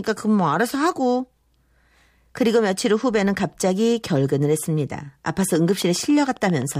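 A steady ticking of about ten clicks at 7.5 per second, about as loud as the speech, runs from 5.29 to 6.76 s. This train of clicks is likely interference or a faulty connection or power supply.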